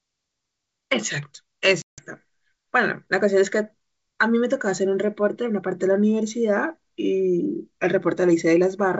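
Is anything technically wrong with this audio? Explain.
Yes. Packet loss on an ADPCM call, 1.82 to 2.02 s: about 160 ms drops to hard-edged silence, roughly fifteen packets. The decoder's predictor and step size then fall out of step with the sender's, so speech returns slightly distorted. The G.722 wideband coding itself sounds clean.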